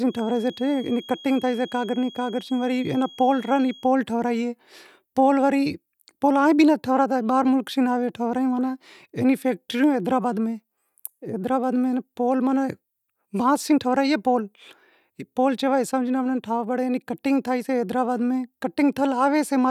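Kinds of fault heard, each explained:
Feedback whistle: a thin, steady 3.3 kHz tone sits well below the speech for the first 3.9 s, likely from a loudspeaker-to-microphone loop held just short of runaway.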